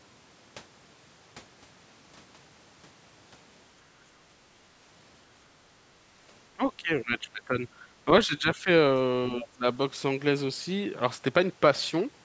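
Speech suppressed in double talk occurs from 6.54 to 7.54 s, then again at 7.8 to 7.87 s, 8.27 to 8.68 s and 9.39 to 9.65 s. This is likely an echo canceller that could not tell the talker's own voice from the loudspeaker echo while both sides spoke, so it turned the microphone down. The voice dips and thins, deepest in the first stretch at roughly 20 dB down, with lighter drops of a few dB to around 15 dB later.

The other side's voice leaking through appears from 9.43 to 9.48 s, inside that last dip. A short scrap of a second voice gets past, roughly 20 dB below the talker. Its likely cause is the loudspeaker signal picked up by the microphone and not fully removed by the echo canceller. It is too brief to follow, heard as a fragment rather than a phrase.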